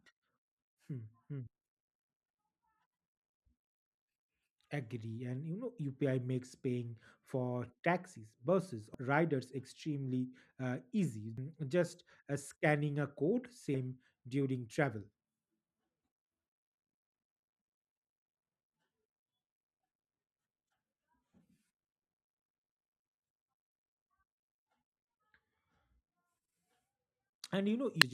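Damaged data in a compressed stream causes brief disturbances in this speech at 8.94 s after "paying for taxis buses", 11.38 s after "uh easy", 13.74 s before "during travel", and 28.02 s, where corrupted frames make the decoder lose sync.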